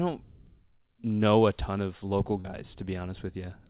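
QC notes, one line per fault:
2.40–2.46 s, short concealed packet loss: just after "a ton of local", about 40 ms of audio arrived too late and the decoder filled the gap by extending the preceding sound, then blending back, heard as a brief smeared wobble within band-limited audio.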